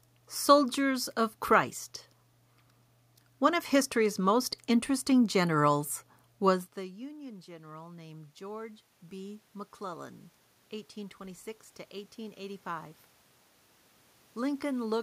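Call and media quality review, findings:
Automatic gain rising, 6.74 to 10.23 s. Voice and room noise swell together by about 8 dB over roughly 3.5 s. Probable component: AGC in the capture path. Mechanism: the speech level at the mic fell by about 22 dB when the talker moved back around 6.5 s. The AGC read this as a quiet input and ramped its gain up slowly, which lifted the background along with the voice. The level drop is normal talker movement, not a fault.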